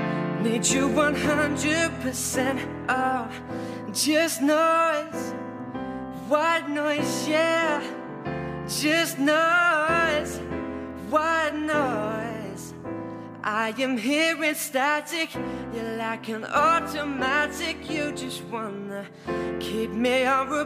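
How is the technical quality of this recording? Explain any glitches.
No glitches can be heard, so the technical quality of this recording gives nothing to explain.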